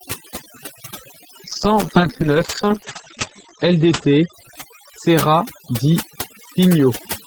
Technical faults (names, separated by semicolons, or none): overdone noise removal; call bitrate drop